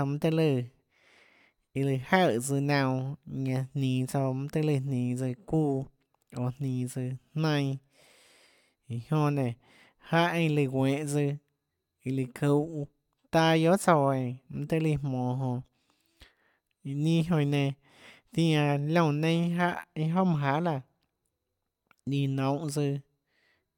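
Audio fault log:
No faults detected.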